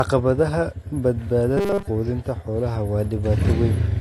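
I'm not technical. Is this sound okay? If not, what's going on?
No. The whole recording sounds dull and smeared, with a fizzy, warbling edge on hissy sounds. That is most likely AAC compression squeezing the file too hard, discarding fine detail and the highest frequencies.

From 1.57 to 1.88 s the sound turns into a stiff, metallic buzz at 200 Hz. This is robotic sound from repeated short buffers, likely caused by audio arriving too slowly: the player loops a 5 ms scrap to cover the gap, and most of that stretch is repeats.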